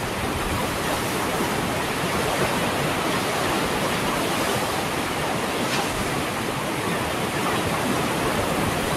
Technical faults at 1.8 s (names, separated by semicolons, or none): none